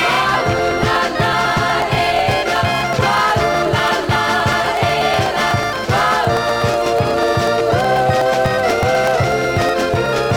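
From 0.10 s to 10.31 s, periodic USB or driver dropouts recur every 0.123 s. Each time, a blocked bus or driver skips roughly 2 ms of audio, so around a hundred ticks sound during signal. Their strict spacing separates them from random clicks.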